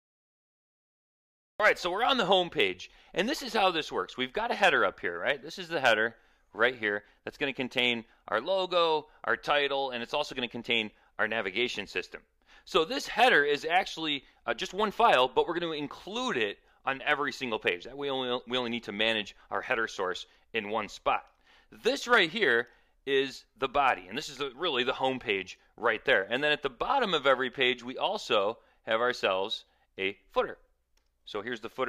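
A cut-off start runs from 0 to about 1.60 s: the opening is digital silence, and then the audio appears abruptly at 1.60 s, already in the middle of a sound. Capture or streaming began late, so whatever came before that point was never recorded, and the sound enters at full level with no natural attack or fade-in. The result is a hard, clipped entry.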